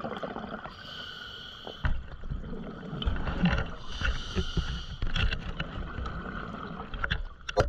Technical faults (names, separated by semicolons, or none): compressed frames skipped